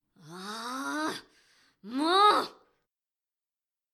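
Nothing technically wrong turns up anywhere in this bit of audio, so there's no problem to point to here.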